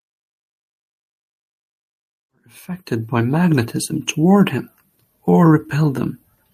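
Nothing stood out as a technical problem on listening to this speech, and the level fades in gently from around two and a half seconds until 3.38 s, much as an editor would shape an opening.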